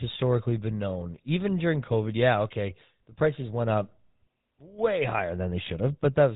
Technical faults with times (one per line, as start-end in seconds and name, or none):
0.00-6.36 GSM full-rate codec